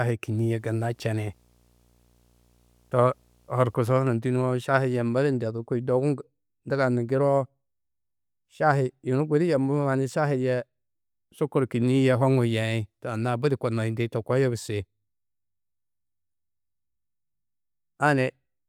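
Video or display buzz runs from 0.39 s to 3.80 s at the start of this speech clip. A display or video cable has coupled interference into the audio path, so the picture's 60 Hz field rate appears as a buzz with a gritty hash of harmonics riding above it. It sits faint and low under the speech, roughly 40 dB down, and stops at 3.80 s once the coupling ends.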